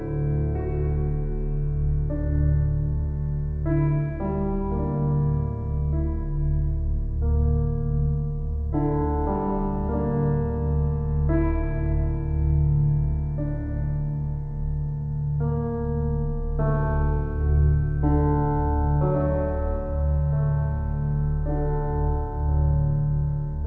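No technical faults are audible.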